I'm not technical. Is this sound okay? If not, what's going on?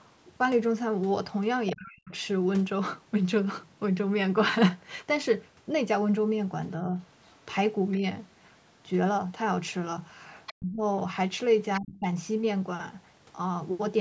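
No. It's a speech recording from a call. A second, fainter voice can be heard. This is likely the other side's voice leaking through from a loudspeaker, near 1.7 to 1.9, 7.2 to 7.9 and 10.5 to 11.8 seconds.

At the same moments the main voice drops away. This is speech suppressed in double talk. The call's echo canceller likely turned the talker down too, briefly at 1.7 to 2.1 seconds and longer at 10.5 to 12.1 seconds. Around 6.8 to 8.0 seconds the dip is only slight.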